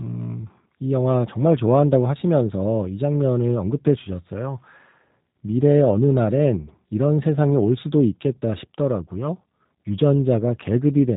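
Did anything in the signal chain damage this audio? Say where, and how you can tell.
Yes, and it's the codec stage: the whole clip sounds like it went through G.729. Nothing gets past about 3.8 kHz from start to finish, and the speech has that plainly audible rough, slightly synthetic edge. That fits a low-rate 8 kbit/s VoIP coder that doesn't send the waveform at all. It rebuilds each short frame from a vocal-tract filter, a pitch predictor and a handful of pulses.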